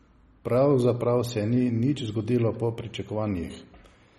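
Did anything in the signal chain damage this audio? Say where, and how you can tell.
Yes, at the codec stage: throughout the speech there is plainly audible MP3 compression damage, likely from a low-bitrate encode around 32 kbps. Nothing remains above 13.2 kHz, and weak spectral lines flicker frame to frame, giving a watery, swirly texture and smeared consonant attacks.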